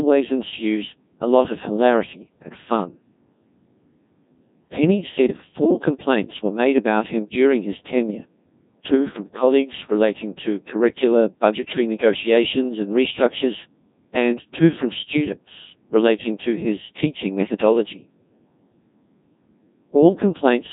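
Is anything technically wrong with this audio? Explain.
Yes. The speech has passed through a Codec 2 vocoder throughout. It keeps only pitch, voicing, energy and spectral shape, rebuilding speech from sine waves. The result is robotic, buzzy and heavily damaged. Nothing sounds above 3.7 kHz, and the coarseness points to roughly 1.6 kbit/s.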